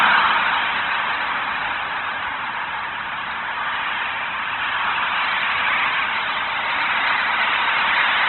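From start to finish the audio stops dead at about 4.2 kHz, and everything below that edge comes out rough and grainy, with tones breaking up into a hissy texture. That points to Opus compression, likely in its music mode at a very low rate, something like 12 kbps. Short on bits, the encoder keeps each band's energy but fills the detail with folded or noise-like content, which gives that grain, and it has narrowed the bandwidth hard.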